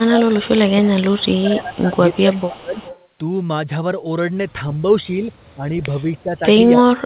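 Speech, carried over a narrowband call link with nothing above 4 kHz, which fits G.711 A-law, and it has two related problems. First, speech suppressed in double talk: the voice dips from 0.0 to 1.98 s by about 15 dB, again from 2.22 to 2.81 s by about 20 dB, and from 5.56 s to the end by as much as about 30 dB, likely because the echo canceller couldn't separate this talker from the far side talking over them. Second, an echo leak: a faint copy of the voice, trailing by 294 ms and about 20 dB down, shows up from 1.76 to 2.58 s, 2.74 to 3.04 s and briefly at 6.82 to 6.86 s. That's likely the loudspeaker end's canceller letting some of its mic pickup slip back through.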